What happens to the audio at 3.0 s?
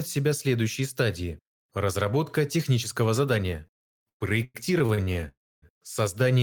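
Nothing goes wrong at 3.0 s; the speech continues intact through that moment with no audible fault.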